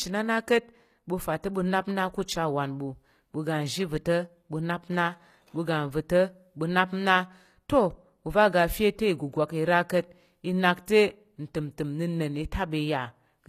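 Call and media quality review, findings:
Gritty, lispy s sounds throughout; treble present but synthetic, cut above 14.9 kHz. Likely HE-AAC compression at a low bitrate, near 24 kbps; copied-up bands, unlike a plain lowpass's dull top.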